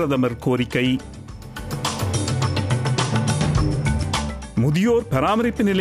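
No technical faults are audible anywhere in the clip. Nothing in the sound needs flagging.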